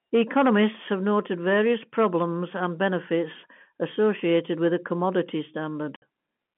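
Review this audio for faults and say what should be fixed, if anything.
Hard clipping runs from 0.15 to 0.68 s, where the speech is driven about 6 dB past what the signal path can carry. The peaks are sliced flat, and those squared-off tops generate high-order harmonics that come across as a gritty, crackling edge on each loud syllable in that opening half-second. Because the speech travels over a G.711 telephone line limited to roughly 150 Hz to 3.4 kHz, the highest of those harmonics are cut off, though the distortion below that limit remains. To prevent it, set input gain so peaks sit several decibels below full scale, or add a limiter ahead of the converter.

Packet loss filled with silence occurs at 5.96 to 6.02 s, a 60 ms gap near the end of the speech. The receiver had no audio for that span and inserted digital silence, so the speech drops out abruptly, with hard edges at each side of the gap. 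A 60 ms hole fits three consecutive 20 ms packets lost in one burst. To prevent it, use a jitter buffer with packet loss concealment, and investigate the network path for burst losses.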